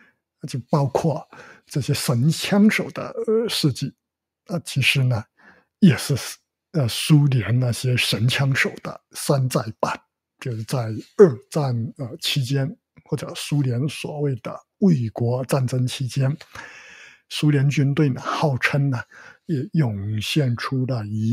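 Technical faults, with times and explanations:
5.38 to 5.63 s, sound cut by the noise suppressor: the suppressor mistook this sound for noise, dipping it by about 10 dB for roughly 150 ms, a level drop rather than a full dropout.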